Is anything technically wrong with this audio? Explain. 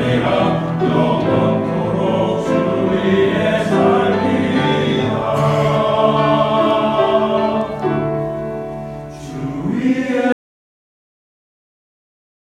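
Yes. At 10.32 s the audio drops out to silence and stays silent to the end, about 2.2 s. The input was likely lost while recording continued, writing silence. It sounds like an abrupt cut with no room tone. The waveform goes flat, and the spectrogram turns blank.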